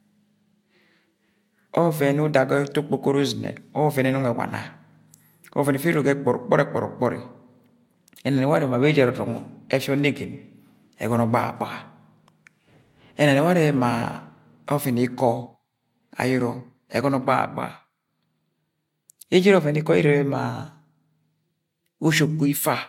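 No technical faults occur at any point in this speech recording.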